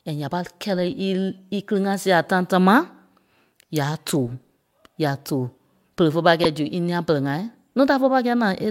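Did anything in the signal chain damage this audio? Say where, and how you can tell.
Yes, at the codec stage: a corrupt frame decoded at 6.40 to 6.46 s, a loud burst peaking around -5 dBFS across about 7 frames. Flipped bits in the compressed data made the decoder apply wrong gains and codes, throwing energy into the wrong frequencies for those frames.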